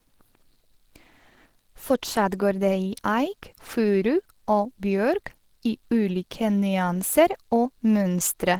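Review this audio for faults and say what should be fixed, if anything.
Opus compression runs through the whole speech clip: the sound is muffled and hoarse, with plainly audible grainy roughness, likely from Opus dropping into its hybrid speech mode, which fits a low bitrate near 16 kbps while still reaching about 20.3 kHz. Encode at a higher Opus bitrate.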